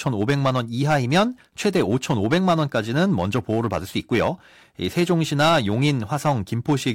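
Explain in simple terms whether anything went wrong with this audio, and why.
Yes, this speech has hard clipping from start to finish. The recording was pushed louder than the equipment could handle, so the loudest moments had their tops sliced flat. Only a small share of the sound, around one part in fifty, gets cut, so you hear crackly, gritty bursts on the strongest syllables rather than fuzz everywhere. Unlike background hiss, which stays even, this roughness appears only when the speech gets loud.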